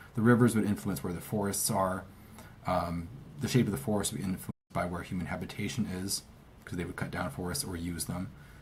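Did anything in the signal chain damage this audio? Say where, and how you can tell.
Yes, at the playback stage. The sound cuts off in mid-flow at 4.50 s and stays silent until 4.71 s, a gap of about 190 ms, before continuing. This is a playback stall, likely from the player running short of data or having its output thread blocked. The output simply had nothing to play. A brief buffer underrun would give a click or a gap of a few milliseconds; this clean, sustained silence points to a longer starvation.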